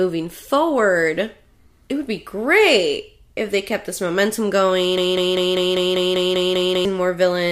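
Right after "they kept this momentum", at 4.98 s, a broken-record loop begins. A 197 ms fragment repeats exactly, ten times back to back, until 6.85 s. The speech meant for that span is lost. A stalled player or stream likely kept resending its last fragment.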